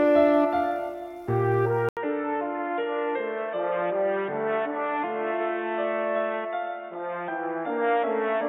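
At 1.89 s the sound drops out for about 80 ms, then returns duller and boxier and stays that way to the end. Nothing above 3.7 kHz gets through, the level falls by roughly 5 dB, and a new background noise appears, around 35 dB below the signal. The short gap and the abrupt change in bandwidth, tone and noise floor point to the input likely being switched to a poorer device, such as another microphone or a headset's call profile.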